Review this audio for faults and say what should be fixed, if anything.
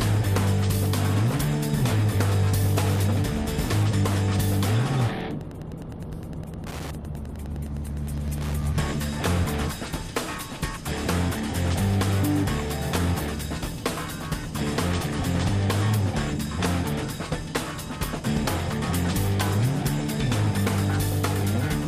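A steady, buzzy ticking, close to ten clicks a second, sits under the sound from 2.51 s to 8.54 s at around 20 dB below it. This is Wi-Fi interference: a nearby Wi-Fi radio sends a beacon every 102.4 ms, and the audio circuit rectifies each RF pulse into an audible tick. To fix and prevent it, move the Wi-Fi router or device away from the microphone, cables and interface, and use shielded, balanced connections.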